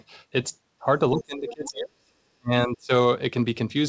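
From 0.99 to 2.13 s, and again from 2.39 to 2.91 s, the speech is pulled down hard in pieces, dropping by about 40 dB at its deepest in the first stretch and about 30 dB in the second. This is speech suppressed in double talk, likely caused by an echo canceller that could not separate near-end speech from loudspeaker echo while both sides talked and so attenuated everything. The band stops at 8 kHz, consistent with G.722 on the call path.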